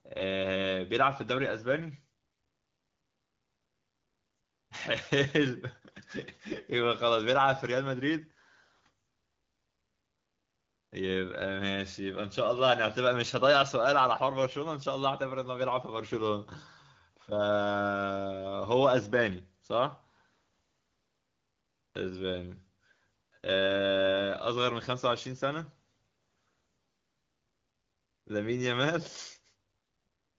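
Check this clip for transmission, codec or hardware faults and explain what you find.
No transmission, codec or hardware fault turns up anywhere in this speech clip. It runs through an AMR wideband (HD Voice) codec at 12.65 kbit/s, a rate where speech stays clear and the coding leaves only light marks.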